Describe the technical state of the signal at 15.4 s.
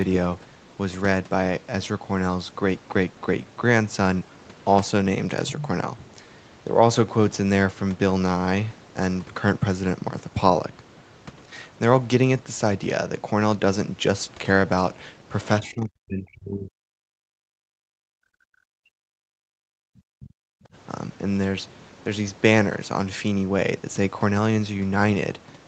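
From 15.41 to 15.48 s, the other side's voice leaks through as a faint, brief scrap far below the speech. The likely cause is loudspeaker echo the echo canceller missed.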